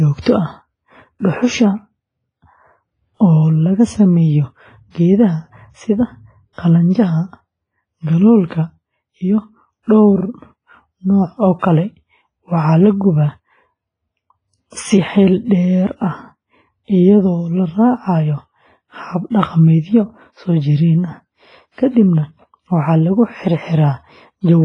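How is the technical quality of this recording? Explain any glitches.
The recording is clearly degraded by heavy lossy compression throughout the speech. Nothing reaches above about 10.4 kHz, and the sound has a washy, ringing quality with hiss that swells and fades along with the talker.

This is likely WMA compression, and the damage fits a low bitrate of around 24 kbps. The transform's long blocks smear quantisation noise over tens of milliseconds and zero out weak components. Unlike a plain low-pass filter, it leaves breathing hiss and pre-echo-like ringing around onsets.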